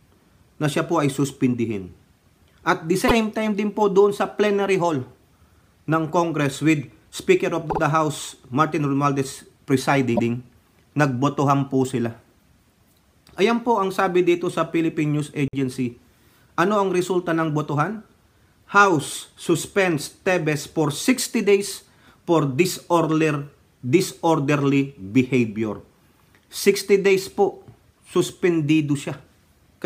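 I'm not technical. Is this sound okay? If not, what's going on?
No. The sound has repeated frames. Small pieces of the audio play again right after themselves, so you hear a quick stutter. This happens four times. At 3.07 s a 52 ms piece repeats once. At 7.69 s a 52 ms piece repeats twice. At 10.15 s a longer 131 ms piece repeats once. At 15.48 s a 26 ms piece repeats twice. The sound gets longer by each repeat.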